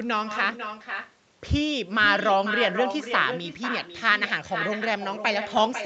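From start to finish there's echo with no canceller: the far end's loudspeaker is feeding its microphone, so every phrase comes back roughly half a second later, about 9 dB down and thinner, riding over the top end that stops at 8 kHz.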